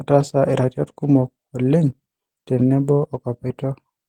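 A short speech recording with nothing technically wrong with it.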